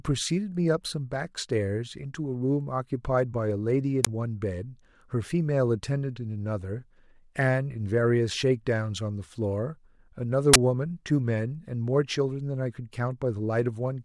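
At 4.05 to 4.07 s and again at 10.54 to 10.56 s, the speech is broken by a short, loud burst of harsh digital noise. Each is an uninitialised buffer: a 20 ms block went to the output before any audio was written into it, so stale memory contents played as samples. Unlike a click or a dropout, each burst fills a full 20 ms block with loud, unrelated noise.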